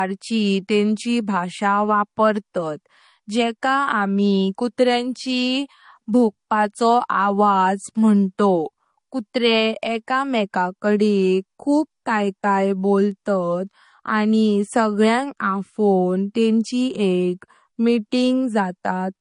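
Low-bitrate audio saved at a high bitrate runs through the whole speech recording. Nothing sounds above 10.6 kHz, and the smeared, swirly coding artefacts of a low-bitrate MP3 remain. That sharp ceiling fits an original MP3 near 40 kbit/s that was likely re-encoded later at a far higher rate. The larger second file adds nothing back, so the missing treble and the artefacts from the first pass are carried through unchanged.

Clock slip clicks begin at 0.48 s and continue until 18.89 s. Faint, evenly spaced ticks come about every half second, roughly forty in all. They stand out on louder, sustained stretches and vanish in the pauses. The most likely cause is two devices running on separate, unsynchronised clocks with an offset of around 40 ppm. Each time that drift adds up to a whole sample, a single sample is dropped or repeated, leaving a tiny discontinuity.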